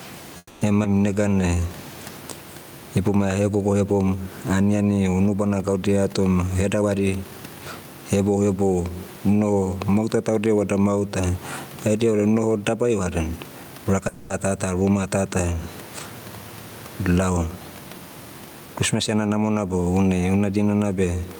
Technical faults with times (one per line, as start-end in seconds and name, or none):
0.00-21.40 gain pumping
0.37-0.63 call audio freeze
0.83-0.86 skip ahead
1.15-1.61 jitter buffer slow-down
6.40-7.32 jitter buffer speed-up
12.70-14.02 jitter buffer speed-up
14.08-14.32 call audio freeze
18.46-19.36 jitter buffer speed-up